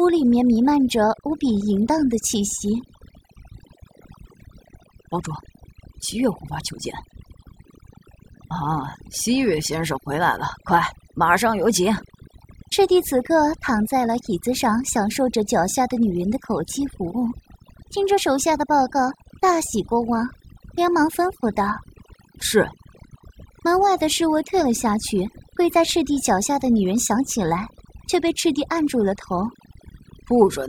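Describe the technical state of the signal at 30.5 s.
Overdone noise removal is audible at 30.5 s, as it is throughout the clip. The noise reduction was pushed too hard, so any frequency band that sits close to the tool's noise estimate is pulled far down or switched off, and the softer components of speech fall into that range too. Around 30.5 s the background drops and breaks up into twinkling, warbling specks.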